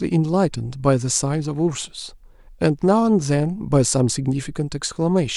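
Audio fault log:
No faults heard.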